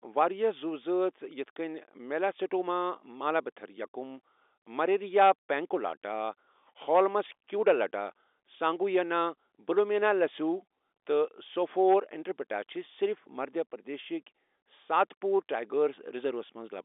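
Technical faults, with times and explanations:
No technical faults can be heard in this speech. It comes through G.711 mu-law telephone coding working as it should, its content held to a line band of roughly 300 Hz to 3.6 kHz, which fits a standard 64 kbps phone channel.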